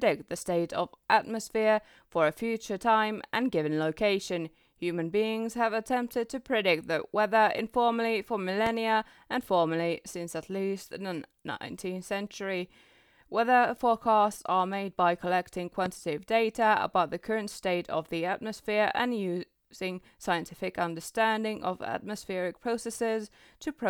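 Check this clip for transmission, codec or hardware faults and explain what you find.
Two loud pops break into the speech, at 8.66–8.69 s and 15.86–15.88 s. Each is a single sharp crack, about 10 dB above the speech, which carries on underneath. The likely cause is a sudden voltage spike from a switch, plug or static discharge entering the signal chain.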